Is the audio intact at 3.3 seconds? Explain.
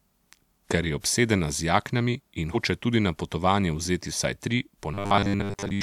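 Yes, the speech at 3.3 seconds is intact, with no audible fault at that moment.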